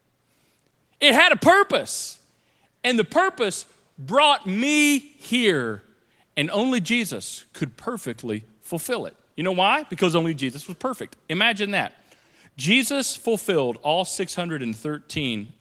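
Listening to this speech clip, nothing stood out as a technical problem at any point.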